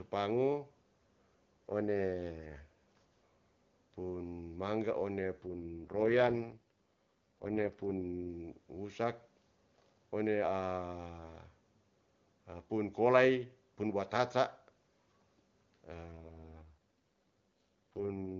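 AMR rate drops at 5.42 to 8.29 s and from 16.12 s to the end: the link degrades and the codec falls from about the 23.85 kbit/s mode to what sounds like 6.6 kbit/s. The band and continuity hold, but the voice turns rough and synthetic.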